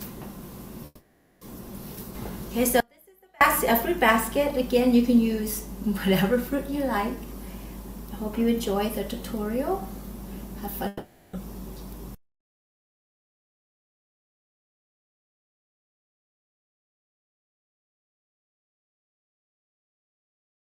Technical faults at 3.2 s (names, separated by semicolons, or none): audio dropout to a faint residue